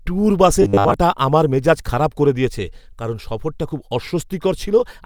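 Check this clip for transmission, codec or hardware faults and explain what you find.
One fault turns up. From 0.62 to 0.94 s, between "ট্যুর বাসে" and "আমার মেজাজ খারাপ করে", there's robotic sound from repeated short buffers, likely audio arriving late, so roughly 10 ms snippets loop over most of the stretch, giving a rigid 100 Hz metallic buzz.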